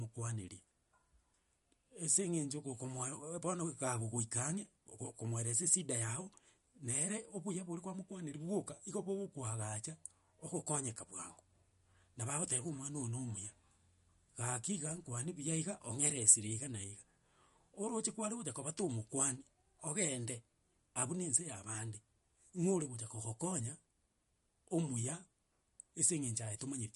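From start to finish the speech has a hard ceiling at 11.2 kHz with nothing above it, and the damage is plainly audible: a watery, swirly texture and chirpy, metallic s sounds. That's likely MP3 compression, at a rate that fits something around 48 kbps. Starved of bits, the encoder chopped off the top band and dropped quiet frequency lines, which then flicker in and out between frames. That flickering is the swirl you hear.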